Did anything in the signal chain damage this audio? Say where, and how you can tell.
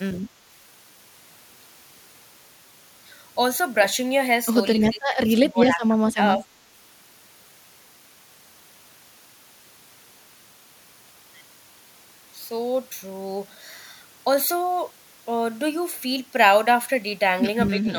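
Yes: speech suppressed in double talk, at call processing, from 4.83 to 6.46 s and again from 17.79 s to the end. In the first stretch the speech dips for roughly a second in total, falling by about 20 dB at its deepest. The closing moment drops by about 15 dB. The likely cause is an echo canceller facing both sides talking at once, unable to separate this talker from loudspeaker echo, and attenuating everything.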